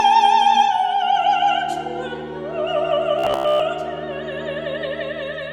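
From 3.19 to 3.63 s the sound turns into a rigid, metallic buzz at about 66.7 Hz that still roughly tracks the underlying audio. This is robotic sound from repeated short buffers. The likely cause is new audio arriving too slowly, so playback keeps looping the last fragment of roughly 15 ms, matching the buzz period, while the real material is skipped. Most of that stretch is repetition rather than fresh audio, which imposes the fixed-rate buzz.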